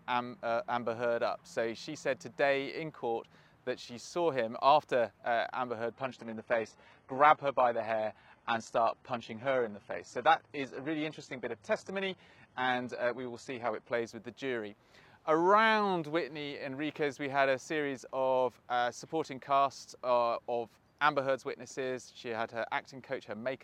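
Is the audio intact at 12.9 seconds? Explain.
No. An adaptive stream at a lower bitrate runs from 5.92 to 13.92 s. The slowed connection forced a low-rate version, so the treble abruptly turns synthetic, with no gap.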